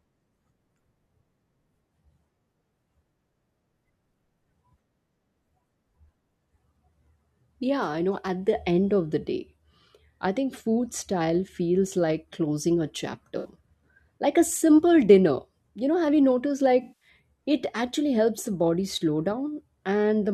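At 13.38 to 13.49 s, after "feels like closing a", and again at 16.82 to 17.08 s, between "know have you noticed" and "it actually helps the", AAC frame loss with concealment replaces the missing audio (64 ms, then 192 ms) with a smeared, phasey rebuild of the previous spectrum rather than the clean silence of a plain dropout.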